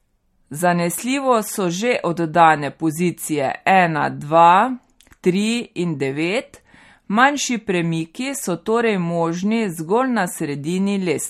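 From start to finish the speech carries plainly audible coding damage, most likely MP3 compression at a low bitrate, the sort of thing you'd expect around 48 kbps. There's nothing above 16 kHz, so the top end stops dead, and the starved encoder lets weak frequency components flicker in and out between frames. That gives the voice a watery, swirly edge, with chirpy metallic bits on the s sounds and smeared consonant onsets.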